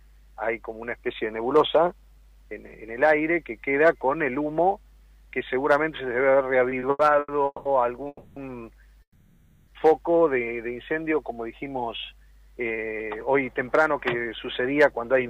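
From 6.69 to 7.67 s the audio stutters through five short stalls, repeated stalls where packets arrived late and the jitter buffer kept running dry. The receiver stretched the last sound across about 420 ms in total, the longest hold being 190 ms, so nothing is lost but the passage drags.

Two call audio freezes follow, at 8.07 to 8.38 s and 9.02 to 9.69 s. The sound hangs as a fading continuation for 290 ms and then 650 ms, with roughly 30 ms and 70 ms of near-silence at the tail. The likely cause is packets held up in transit, and playback resumes where it stopped.

From 12.70 s to 15.26 s a jitter buffer speed-up trims the accumulated delay, cutting out about a fifth of a second in small pitch-period slices. The audio runs about 9% fast at unchanged pitch and sounds hurried.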